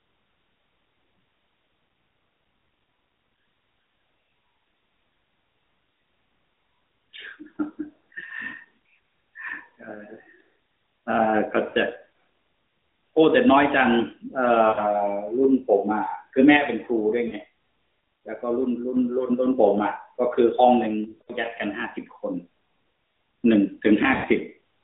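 Lost AMR speech frames at 11.70, 14.68, 17.28, 21.22 and 24.14 s: failed frames made the decoder repeat old pitch and vocal tract settings with falling gain, producing 40 to 100 ms warbling, fading dropouts.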